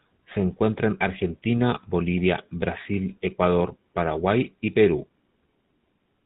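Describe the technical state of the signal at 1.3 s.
GSM full-rate codec damage is present at 1.3 s, as it is throughout the speech, with artefacts that fit the 13 kbps GSM full-rate coder. The codec models the vocal tract as a filter and drives it with a sparse train of regularly spaced pulses, keeping only every third excitation sample. Nothing above 4 kHz survives, so the speech sounds muffled, with a plainly audible buzzy, gravelly roughness.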